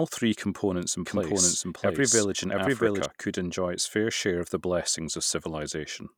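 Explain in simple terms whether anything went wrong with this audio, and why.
From 1.06 to 3.06 s, after "three components in" and before "could enjoy its fair", there is a doubled audio track. A second, equally loud copy runs about seven tenths of a second behind. It starts and stops abruptly, likely from a slower second capture path.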